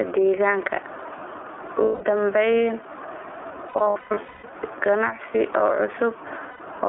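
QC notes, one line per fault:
Throughout: gain pumping. Gain is set far too high for the microphone, and the likely cause is a fast limiter or compressor clamping down on each loud syllable, then releasing. The gain swings by around 15 dB, so loud and quiet passages sit unnaturally close in level and the speech sounds squashed and breathing.
Throughout: iLBC codec. The speech has passed through narrowband iLBC coding, which fits its 30 ms frame mode at roughly 13 kbps. Each frame's excitation is coded on its own, and only the telephone band of roughly 300 Hz to 3.4 kHz survives, so the top end is missing and the sound is thin. The codec damage is plainly audible as a rough, slightly synthetic texture on the voice.
1.83–2.02 s, 3.68–4.51 s, 6.50–6.61 s: lost iLBC frames. Packets went missing and the decoder filled each gap by repeating the last pitch cycle mixed with noise. The first gap covers 180 ms and the last 90 ms, each heard as a held, buzzy vowel. 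The middle stretch scatters 570 ms of losses over about 0.8 s, with the longest run about a fifth of a second. Because the frames stand alone, the voice is right again almost immediately after each gap.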